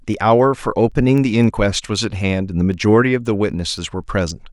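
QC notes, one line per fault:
0.14–4.30 s, word clock ticks: a steady train of sharp, uneven clicks about every 0.3 s, around fifteen in all, under the speech. The receiver runs on its own clock, drifting about 100 ppm from the sender, so each slip drops or repeats one sample.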